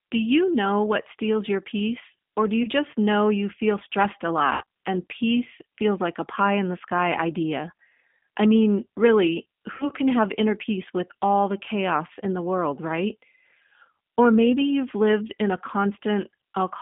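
The whole clip runs through a G.729 codec at 8 kbit/s, squeezed into roughly a 150 Hz to 3.6 kHz line band, so the speech has a rough, slightly synthetic edge. VoIP packet loss concealed by the speech codec hits at 2.63 s after "your peace or do", at 4.53 s after "you feel stressed a", and at 9.74 s after "I mean really". These are gaps of about 20, 80 and 60 ms, which fits one, four and three lost 20 ms packets. At each one the decoder stretches its last sound into a fading buzzy tone or coloured noise.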